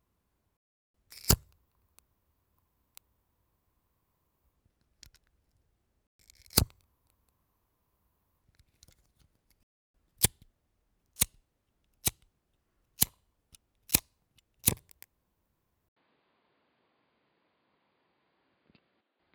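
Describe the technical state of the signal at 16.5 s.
At 16.5 s the signal lies inside an input switched to a poorer device, running from 15.89 s to the end at 19.35 s. After an 80 ms gap, the band stops near 4.9 kHz and a new noise floor sits well below the sound, likely from a lower-grade input taking over.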